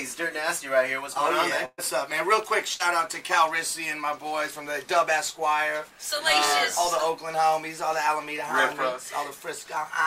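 A burst of packet loss hits at 1.65 to 1.80 s and again at 2.74 to 2.81 s. Each time, consecutive packets failed to arrive, and the receiver stretched the last good sound to cover the hole while fading it out. The first gap has 124 ms of concealment ending in a brief 20 ms silence, and about 120 ms of audio is skipped. The second conceals 57 ms and drops about 60 ms.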